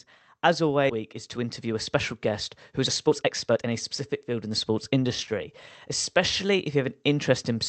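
At 0.89 to 0.91 s the speech jumps forward in a skip ahead: roughly a second of audio is gone, and the two sides are joined with no silence or filler between them. That seamless splice separates it from a dropout, which leaves a gap or concealment noise.

Jitter buffer speed-up follows in three stretches: 0.99 to 2.31 s at 105%, 2.71 to 5.52 s at 115%, and 6.19 to 7.17 s at 104%. Repeated pitch-period cuts remove about 70, 400 and 50 ms, so delivery sounds hurried in the first two stretches. Unlike resampling, pitch stays unchanged.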